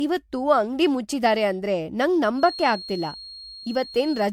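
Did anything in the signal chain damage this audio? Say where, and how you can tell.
Yes. Generation loss runs throughout the clip, at the codec stage. The speech sounds swirly, hollow and smeared, with blurred attacks, more than a single 96 kbit/s MP3 pass would explain. This is likely from around seven re-encodes, each quantising on a shifted frame grid so the damage accumulates.

Feedback whistle from 2.33 s to the end, right after "ಅಂಗ್ಡಿ ಮುಚ್ಚಿದಾರೆ ಅಂದ್ರೆ ನಂಗ್", at the playback-to-capture stage. A thin 4.3 kHz tone sits about 15 dB below the speech and swells and fades slowly in level. A loudspeaker-to-microphone loop is likely held just at the edge of feedback.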